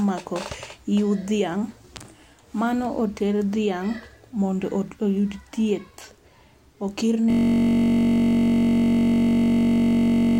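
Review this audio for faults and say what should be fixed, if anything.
A system hang loop starts at 7.30 s and lasts to the end. One 21.33 ms slice of speech repeats about 145 times, making a steady 46.9 Hz buzz. This fits a 1024-sample buffer replaying while the driver stalled. A watchdog that mutes output when the buffer stops refilling would prevent it.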